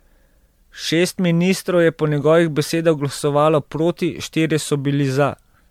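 Generation loss runs through the whole speech clip. The sound is swirly, smeared and hollow, and consonant onsets blur. This likely comes from repeated lossy passes, roughly five, each adding fresh quantisation noise and spectral gaps. The texture fits 96 kbit/s MP3.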